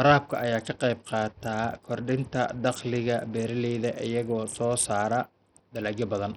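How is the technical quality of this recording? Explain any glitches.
The technical quality is poor: heavy coding damage runs through the whole recording. Throughout the speech, the treble flickers in and out over a gritty, grainy noise floor with aliasing, which points to Bluetooth SBC compression, likely at a low bitrate near 64 kbps. Its few fixed sub-bands leave the upper bands starved of bits and quantise the rest coarsely. Unlike a steady lowpass, the top end comes and goes. The grit is coarse rather than the watery swirl of perceptual codecs.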